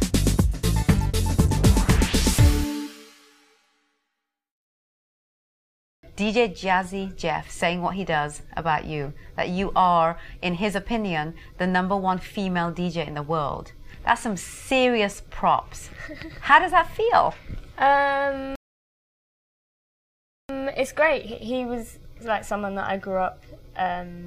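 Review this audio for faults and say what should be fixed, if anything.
The playback buffer ran dry at 18.56 s, producing a rebuffering stall: the player had no downloaded audio left and halted until more data arrived at 20.49 s. The sound drops to silence for about 1.94 s and then picks up exactly where it stopped, so nothing is skipped, but the pause stretches the timeline by that amount. Keeping a deeper startup buffer and using adaptive bitrate switching on slow connections would prevent the stall.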